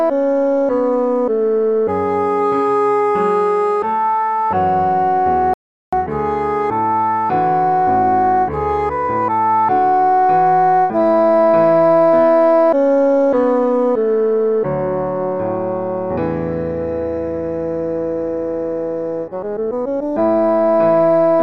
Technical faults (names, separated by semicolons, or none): audio dropout to silence